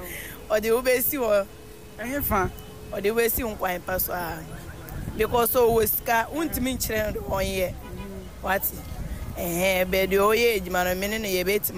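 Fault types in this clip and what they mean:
Low bit depth without dither: throughout the clip a grainy, gritty distortion rides along with the sound and changes as it changes, with quieter passages turning rough and the faintest parts sputtering or dropping out. The likely cause is about 7-bit truncation without dither, putting the error only around 30 dB below the signal. A zoomed waveform shows visible stair-steps, and a spectrogram shows signal-dependent noise and harmonic smearing that appears and vanishes with the sound.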